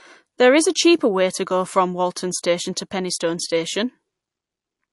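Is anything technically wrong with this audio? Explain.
Yes. Throughout the speech, the damage is plainly audible. This is likely MP3 compression at a low bitrate, around 48 kbps.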